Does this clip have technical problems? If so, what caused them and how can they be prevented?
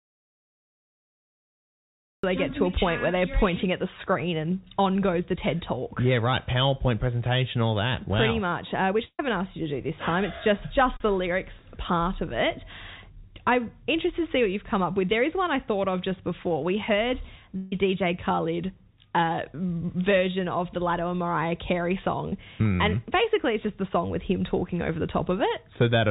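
Yes. An audio dropout to silence runs from the start to 2.24 s, with no room tone. A disconnected or muted input likely caused it. Check connections and mute states before recording.

Two bursts of packet loss occur, at 9.05 to 9.20 s and at 17.57 to 17.73 s. About 140 ms and 150 ms went missing. The receiver held the last sound and faded it, and the first gap ends in silence. A steadier network or a larger jitter buffer prevents this.

Short concealed packet loss causes brief smears at 10.97 to 11.01 s and 22.30 to 22.33 s. Each lost 20 to 30 ms, which the receiver patched over. Forward error correction helps avoid it.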